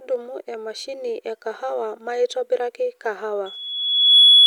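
Speech with loudspeaker feedback squeal from 3.46 s to the end at 4.46 s: the microphone re-amplifies its own loudspeaker, so a single 3.4 kHz tone swells over roughly three-quarters of a second to about 15 dB above the speech. Unlike a steady interference whistle, it grows rather than starting at full level.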